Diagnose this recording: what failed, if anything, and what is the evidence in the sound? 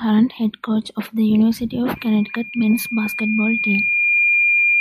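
Loudspeaker feedback squeal begins at 1.95 s and runs to the end of the speech at 4.80 s. A pure tone near 2.4 kHz emerges and swells steadily over about two seconds until it sits roughly 5 dB above the speech. The failure lies in the acoustic and analogue loop between playback and microphone. The mic hears the loudspeaker it drives, and at 2.4 kHz the loop gain tops unity, so that frequency feeds on itself and keeps growing.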